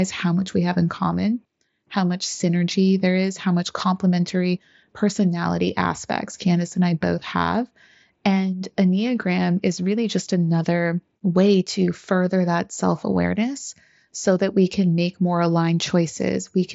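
Speech over a Bluetooth mSBC headset link, band-limited at about 7.7 kHz as that wideband codec dictates, with no faults to report.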